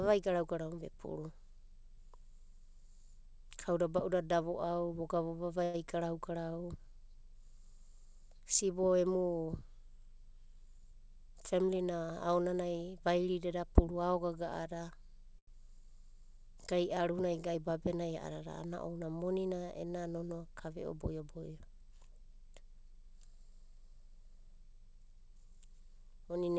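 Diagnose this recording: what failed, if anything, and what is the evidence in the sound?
At 5.64 to 5.89 s and again at 15.39 to 15.50 s, a sound is held unnaturally long, and the speech then resumes exactly where it left off with nothing skipped. These are short stalls from a late packet, a network and buffer-stage fault. A packet missed its playout time, the jitter buffer emptied, and the receiver stretched the last sound by about 98 ms and then 85 ms until the data arrived.

From 10.60 to 11.76 s and from 21.0 to 22.36 s the speech runs noticeably hurried, at about 106% and 107% speed, with the pitch unchanged. This is jitter buffer speed-up in the call processing stage. Delayed packets arrived in a burst and left the buffer overfull, so the receiver cut out short pitch-period slices in quick succession, roughly 70 ms and then about 100 ms in total, to bring the delay back down. The path's 8 kHz band limit fits a G.722 wideband call.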